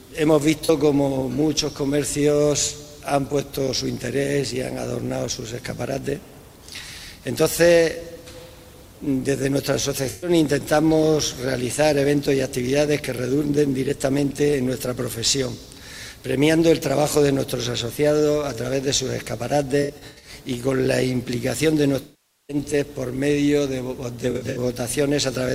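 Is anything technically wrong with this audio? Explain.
Yes. There is AAC frame loss with concealment: the decoder lost whole frames and filled each gap by reusing the last good spectrum with randomised phase or smoothed energy. Brief dropouts near 0.64 s (about 43 ms) and from 10.09 to 10.30 s sound like smeared, phasey patches. Clusters from 19.83 to 20.35 s (runs up to around a tenth of a second) and 24.30 to 24.58 s (about 70 ms at most) give smeared, noisy blurs. The longest gap, 22.02 to 22.57 s, decays toward silence before fading back.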